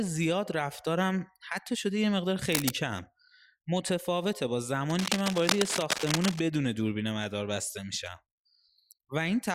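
Speech, with cable scratch noise twice. Dense, uneven scratching covers the sound from 2.52 to 2.71 s at about the speech's level, then from 4.90 to 6.42 s about 5 dB lower. A worn cable or connector being moved is the likely cause.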